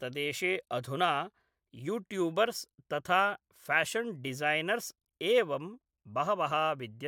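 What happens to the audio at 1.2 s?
Nothing goes wrong at 1.2 s: the speech continues cleanly through that point with no dropout, click, distortion or other fault.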